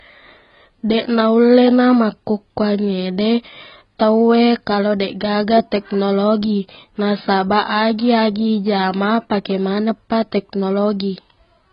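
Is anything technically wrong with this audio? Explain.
Yes, it's there for the whole clip: the speech sounds dull and smeared with nothing above 5.2 kHz, and sibilants come out fizzy and warbling. That's likely heavy AAC compression, which fits AAC-LC at around 16 kbps, where the encoder drops the top end and coarsely quantises what remains.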